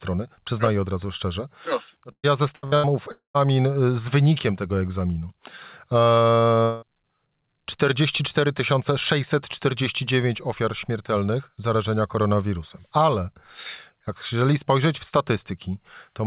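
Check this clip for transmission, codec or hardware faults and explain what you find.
Three network faults can be heard in the speech, all carried over a narrowband call path whose sound stops at 4 kHz, which fits G.711 A-law at 64 kbps.

Repeated packet loss (robotic sound) runs from 2.12 to 2.86 s. Four separate gaps, the longest 114 ms, were each filled by stretching the preceding sound, so about 42% of that span is concealment. The speech turns choppy, with pieces missing. It differs from a dropout because the holes are short and follow one another closely, not one continuous gap.

Two long network dropouts are the likely cause of the next two events. From 3.11 to 3.37 s the last sound is carried on as a decaying fill, then about 140 ms of silence before the speech returns with that part missing. From 6.62 to 6.85 s the speech is replaced by roughly 200 ms of sustained, fading fill with no silence. 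Unlike the packet-loss stretch, each is a single unbroken hole.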